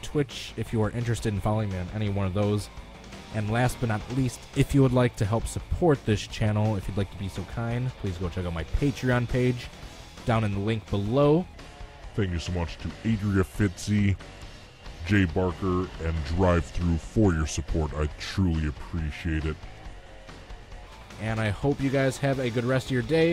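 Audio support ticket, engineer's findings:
Section at the wrong speed, 11.54–20.87 s: audio slows to 0.81x, pitch drops roughly four semitones. Likely clock/resampling mismatch in player or edit. Spectrogram: harmonics and formant bands shift downward, events stretched wider; waveform envelope visibly elongated across the section.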